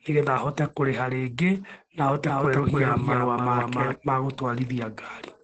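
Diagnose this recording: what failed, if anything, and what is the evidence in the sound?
The codec stage is at fault throughout the clip, which has plainly audible Opus voice compression. The speech sounds muffled, hoarse and slightly robotic, which fits SILK mode at a low rate near 12 kbps with coarsely coded excitation, in 20 ms frames. On a spectrogram a flat ceiling sits at about 8.4 kHz for the whole clip. That is wideband coding with nothing above it, and the harmonics below look smeared and grainy where a clean recording would show crisp lines.

From 2.26 to 3.96 s there is a doubled audio track. A second copy of the same speech follows roughly a third of a second behind, a few decibels quieter, with no decay or room colour. It cuts in and out abruptly at those times. The likely cause is an edit or mixing stage holding two out-of-step copies, or a slower second capture path. On the waveform the envelope shows a lagged duplicate overlapping the original. 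The spectrogram shows each full-band harmonic pattern repeated a fixed distance to the right.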